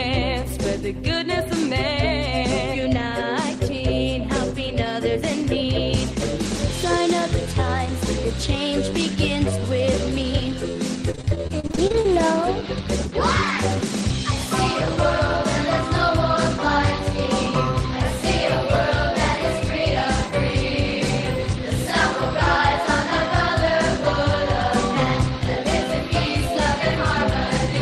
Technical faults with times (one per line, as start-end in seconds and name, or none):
11.11-12.20 repeated packet loss (robotic sound)